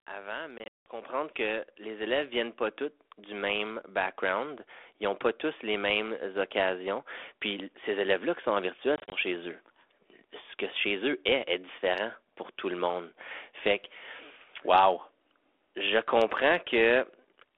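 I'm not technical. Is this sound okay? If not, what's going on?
No. Twice, the call lost small chunks of audio in transit, a fault called packet loss on an ADPCM call. The line filled those gaps with silence, and the receiving end briefly lost track of the sound, so it came back slightly distorted before settling. From 0.58 to 0.86 s, around ten chunks dropped, leaving abrupt holes, the longest about 0.18 s, just before "que les". From 8.96 to 9.17 s, after "qui sont en virtuel" and before "chez eux", shorter gaps of up to 0.04 s break the sound up.

At 1.02 s, also just before "que les", the microphone volume stepped up. The call software decided the microphone was too quiet and turned its input up in one jump, so the speech and the background noise suddenly get noticeably louder together.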